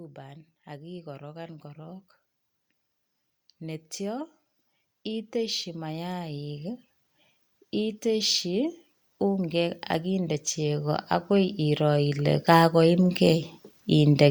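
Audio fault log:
0.14–2.06 s, automatic gain rising: the gain control judged the input too quiet and lifted it by about 4 dB, so speech and background swell together.
5.04–6.83 s, automatic gain rising: a second gradual climb of about 5 dB raises the speech and room noise as one.
7.73–14.26 s, automatic gain rising: a long, slow push of about 13 dB keeps lifting speech and background evenly.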